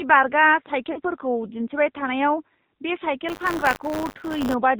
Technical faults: AMR narrowband mobile codec; lost AMR speech frames; buffer tearing

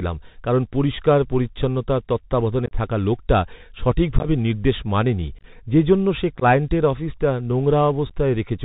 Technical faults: Bluetooth CVSD headset codec; unconcealed Bluetooth headset packet loss

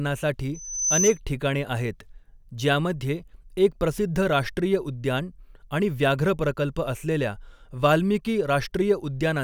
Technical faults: loudspeaker feedback squeal

